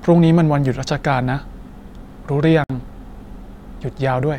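A gap at a join of encoded pieces opens at 2.64 s and runs for 56 ms, to 2.70 s. Separately encoded pieces were joined untrimmed, so end padding and start-up delay leave a short silence with smeared edges before the speech resumes where it stopped.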